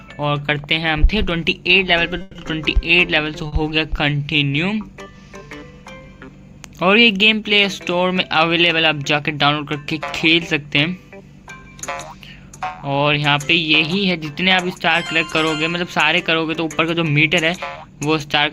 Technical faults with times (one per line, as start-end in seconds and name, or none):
2.21-2.37 call audio freeze
3.47-3.54 short stall from a late packet
13.27-14.33 jitter buffer speed-up
16.91-17.97 jitter buffer speed-up